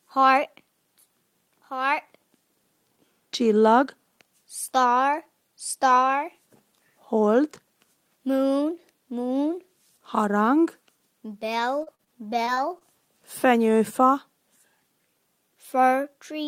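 The audio shows repeated packet loss (robotic sound) between 11.59 and 12.83 s. Across that stretch there are six short gaps, the longest 40 ms, where sound went missing in transit and the receiver patched each hole by extending the preceding sound. About 12% of the span is concealed this way, roughly 0.15 s in total, giving a choppy texture with small pieces dropped.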